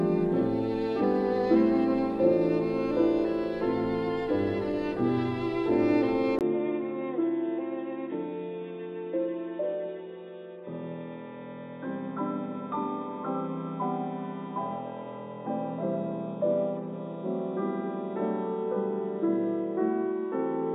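At 6.39 s a 20 ms gap opens, then the sound turns dull and boxy, with nothing above 3.8 kHz, a level drop of around 5 dB and a new hiss well below the signal. This is likely an input switched to a poorer device. The changed noise floor and gap distinguish it from mere filtering.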